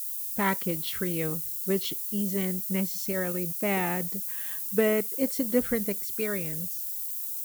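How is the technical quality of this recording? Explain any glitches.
Technical quality is poor, with one fault throughout. Low bit depth with noise shaping, across the whole clip: the speech is stored at just 5 bits, and the rounding error is fed back and pushed toward high frequencies. The result is a steady, thin hiss, nearly as loud as the speech, climbing sharply toward the top of the band.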